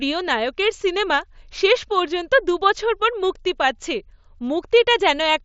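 No technical faults can be heard in this speech clip. It carries the sound of a Bluetooth mSBC headset link, with the band reaching up to about 8 kHz and a light graininess on the louder parts, as that codec leaves.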